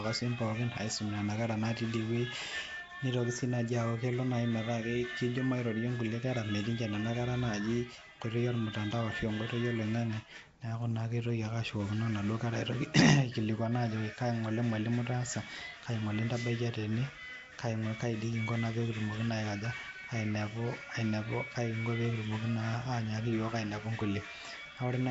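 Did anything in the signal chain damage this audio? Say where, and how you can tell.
Yes. Nellymoser compression runs throughout at the codec stage: a hissy, smeared, underwater sound with nothing above 7.7 kHz, likely a low-bitrate Nellymoser Asao filling unfunded bands with noise.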